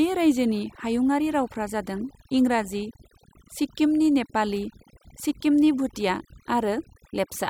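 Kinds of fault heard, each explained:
Overdone noise removal: noise reduction set far too aggressively across the whole speech clip, pulling frequency bands near the noise estimate down or out entirely, taking quieter speech detail with them, so the background drops and breaks up into twinkling, warbling specks.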